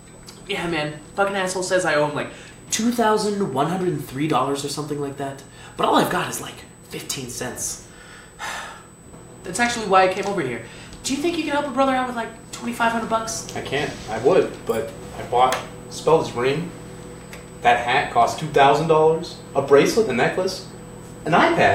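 From start to finish a USB whine sits under the sound: a steady, fixed-pitch tone at 8 kHz, strongest at its 16 kHz harmonic, roughly 25 dB below the signal. It fits the bus's 125 microsecond microframe current draw leaking in through power or ground.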